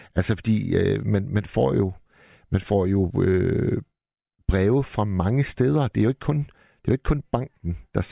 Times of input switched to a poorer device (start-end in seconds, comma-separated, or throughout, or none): none